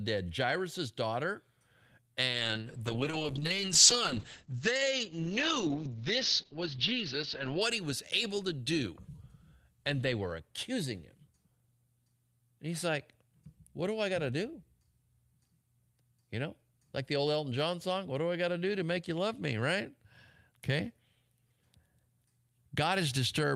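Call bitrate drop in this speech from 2.26 to 7.67 s, before "he was able to": the encoder's coarser coding and an 8 kHz cut-off (down from 20 kHz) sound muffled and watery, consistent with about 8 kbps.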